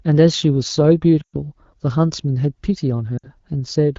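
From 1.22 s to 1.36 s, lost AMR speech frames break up the speech. The decoder fills the gap by repeating the last good pitch and vocal tract settings with falling gain. The sound smears and fades quickly toward silence. The length fits a run of six 20 ms frames. From 3.17 s to 3.30 s, a shorter loss drops the sound to near silence, fitting three frames. Around both gaps, the wideband speech stays clear, which points to a rate near 12.65 kbit/s.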